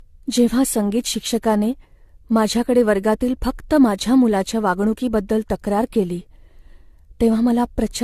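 Speech with generation loss throughout: swirly, hollow and smeared, with blurred attacks, likely from around five re-encodes consistent with AAC-LC at 64 kbit/s. A spectrogram shows nothing above 14 kHz and patchy spectral holes.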